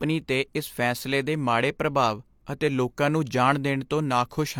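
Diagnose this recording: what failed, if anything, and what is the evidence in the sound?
Converter clocking failed: two devices likely run on unsynchronised clocks about 100 ppm apart, so one sample is dropped or repeated whenever the drift reaches a whole sample. The result is clock slip clicks, regular ticks roughly every 0.2 s, about twenty, from 0.20 s to 4.49 s.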